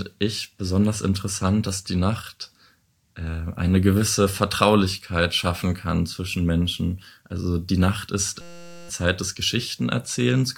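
From 8.41 to 8.89 s a system hang loop replaces about half a second of speech. A 5.8 ms slice, which fits a 256-sample buffer, repeats as a steady 172 Hz buzz, seen as identical waveform cycles and evenly spaced harmonic lines on a spectrogram.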